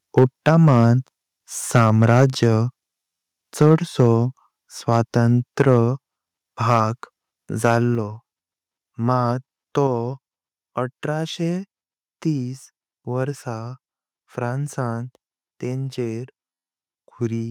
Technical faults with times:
0.17-0.78 microphone overload
0.19 microphone volume stepped down
1.75-2.46 microphone overload
3.61-3.74 microphone overload
3.62 microphone volume stepped down
4.00-4.13 microphone overload
4.93-4.97 microphone overload
5.60-5.74 microphone overload
6.70-6.80 microphone overload
7.64-7.74 microphone overload
7.95 microphone volume stepped down
9.87 microphone volume stepped down

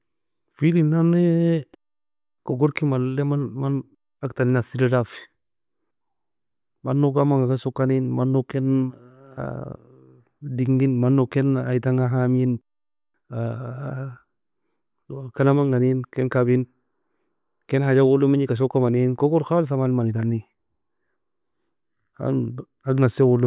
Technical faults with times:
none

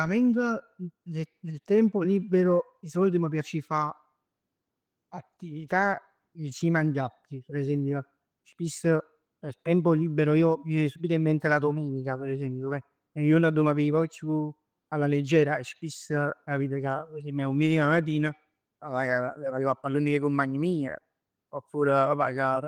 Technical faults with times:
none

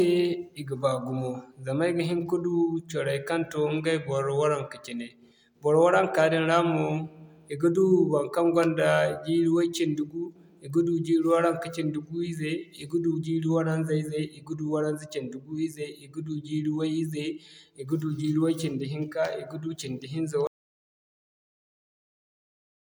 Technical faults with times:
20.47-22.98 audio dropout to silence

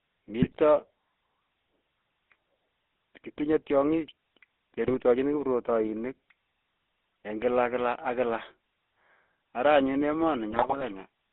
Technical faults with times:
0.00-11.33 GSM full-rate codec
0.40-0.86 GSM bit errors
4.88-4.95 GSM bit errors
10.50-10.83 GSM bit errors

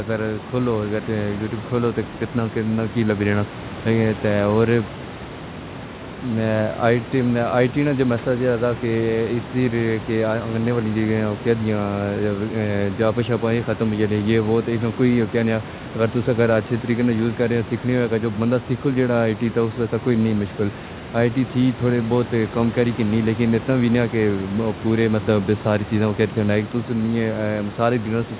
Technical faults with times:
none

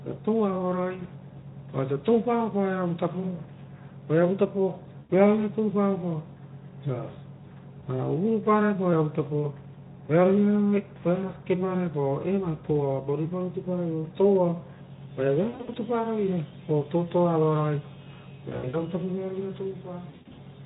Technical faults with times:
4.99-5.12 VoIP packet loss concealed by the speech codec
15.49-15.78 VoIP packet loss concealed by the speech codec
18.50-18.84 VoIP packet loss concealed by the speech codec
20.09-20.39 VoIP packet loss concealed by the speech codec

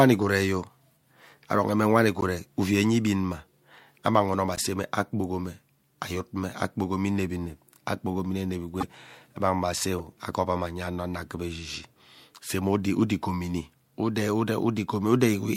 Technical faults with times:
2.18-2.23 corrupt frame decoded
4.56-4.63 corrupt frame decoded
8.80-8.84 corrupt frame decoded
9.98-10.00 corrupt frame decoded

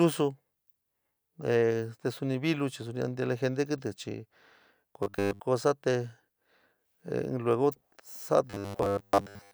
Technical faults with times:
5.03-5.40 robotic sound from repeated short buffers
8.50-9.53 robotic sound from repeated short buffers

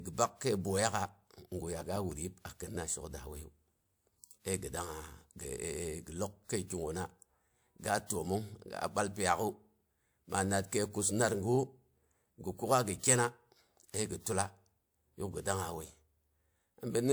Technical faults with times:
0.91-2.12 CD scratch ticks

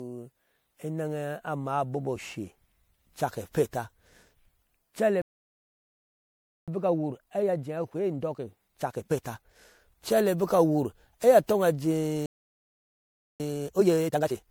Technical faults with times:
0.00-14.51 generation loss
5.22-6.68 playback stall
6.68-9.68 time-compressed catch-up
12.26-13.40 playback stall
13.40-14.51 time-compressed catch-up

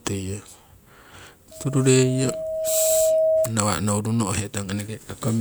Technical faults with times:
1.51-3.53 loudspeaker feedback squeal

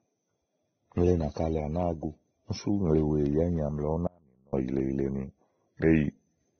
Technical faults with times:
0.00-6.60 transcoding between lossy codecs
4.07-4.53 audio dropout to a faint residue

